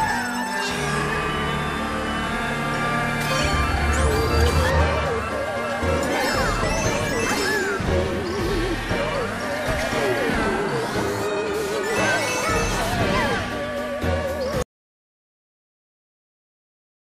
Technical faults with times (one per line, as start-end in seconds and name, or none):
14.62-17.04 audio dropout to silence